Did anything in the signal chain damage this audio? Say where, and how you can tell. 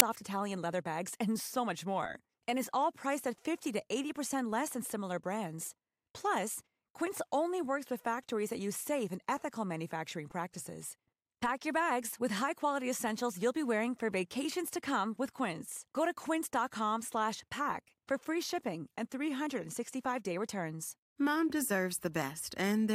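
Yes. Storage/playback: file tags played as audio at 0.00 s, a hard-edged burst of very loud white noise, where embedded cover-picture data was decoded as samples before the speech.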